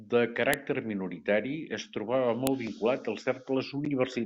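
At 0.54 s, right before "minoritari es", there's a sharp, loud snap, and another at 2.47 s. That's a file header played as audio: the speech was stitched from separate WAV pieces and each piece's header bytes got read as samples.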